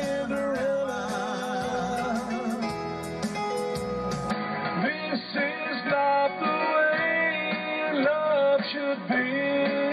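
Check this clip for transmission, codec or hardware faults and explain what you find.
One hardware fault is present. From 4.31 s to the end, the input was likely switched to a poorer device. The new path cuts everything above 4.6 kHz, so the sound turns dull and boxy with no gap at the switch. The level also shifts by a few dB, and a faint new noise floor appears far beneath the signal.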